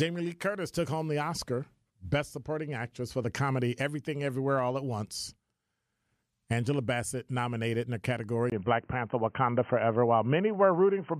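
Speech that, after a 20 ms gap at 8.50 s, turns dull and boxy to the end, with nothing above 3.1 kHz, a modest level shift and faint new noise: likely an input switched to a poorer device.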